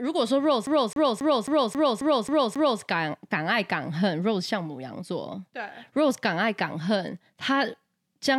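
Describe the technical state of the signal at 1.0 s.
At 1.0 s the speech is caught in a CD stuck on one turn. The fault runs from 0.66 s to 2.82 s. A scratch sends the laser back one track at the same point on each revolution. So a single 269 ms slice of speech plays again and again, eight times in all. A brief mute marks every jump back. The result is a rapid, evenly spaced stutter.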